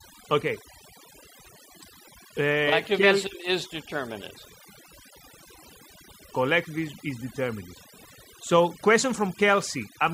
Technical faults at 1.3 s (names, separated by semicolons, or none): overdone noise removal